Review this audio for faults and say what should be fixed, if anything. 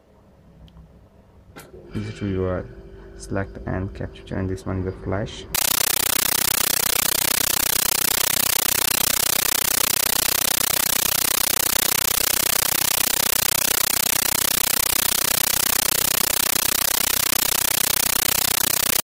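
Compressed stream played as audio, from 5.55 s to the end: the sound gives way to chattering static, bursts of noise about 13.3 ms long repeating 31.25 times a second with gaps between them. This points to an undecoded AC-3 stream, fitting 640 kbps, treated as plain samples. To prevent it, decode the bitstream before playback, or send it only to a receiver set to decode it.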